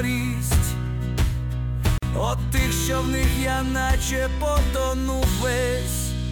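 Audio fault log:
1.98–2.03 s: gap at a join of encoded pieces. A 46 ms gap opens with smeared edges, left by untrimmed encoder delay and padding, before the sound resumes.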